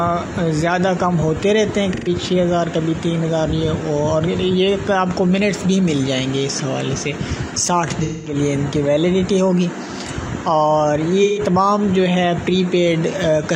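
At 1.93 to 2.09 s, 8.03 to 8.35 s and 11.23 to 11.39 s, AAC frame loss with concealment occurs. The decoder rebuilds missing stretches from the last good spectrum. Each patch sounds smeared, noisy or phasey. The gaps run about 128 ms, 213 ms and 128 ms, which fits three, five and three lost frames.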